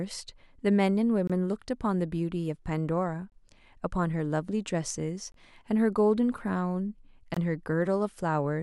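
At 1.27, 3.30, 5.32 and 7.34 s the speech drops out for about 23 ms each time, a gap between chunks: each 2-second chunk is followed by a sliver of silence, so nothing's lost, but you hear little holes ticking by every two seconds.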